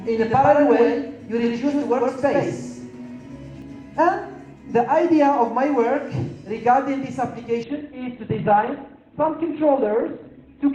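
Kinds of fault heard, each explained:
Doubled audio track: a second, full-band copy of the sound runs about a tenth of a second behind the first and at about the same level, most likely from a second capture path or an edit holding two copies out of step. It is already present when the clip begins and stops abruptly at 3.62 s. On a spectrogram every onset appears twice, a fixed short gap apart, with no decay or room colour, and the waveform shows each transient echoed once.
Adaptive stream at a lower bitrate: from 7.64 s to the end, the stream switches without a gap to a much leaner encoding, because a slowed connection forced a lower-bitrate version. Coding artefacts rise, consistent with a drop from around 64 to about 12 kbit/s Opus. A spectrogram shows a sudden change in coding detail at that point, while the waveform envelope barely changes.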